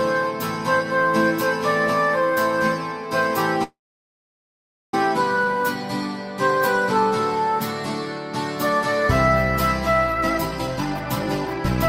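At 3.63 s the sound stops moving forward, and a call audio freeze follows until 4.94 s. The last sound carries on briefly as a fading buzz, then about 1.19 s of near silence. Delayed packets likely left the jitter buffer empty, so the receiver filled the wait itself. When the audio resumes, it picks up where it broke off. Nothing is lost. About 1.3 s of extra delay has been inserted instead.

From 10.07 s to the end, a jitter buffer speed-up makes the audio run at about 141% of its normal rate. Pitch stays the same, but the pace sounds rushed. The buffer was holding more audio than its target. To catch up, the receiver cut out many short pitch-period pieces in a row. Roughly 0.7 s of material is trimmed away over this stretch.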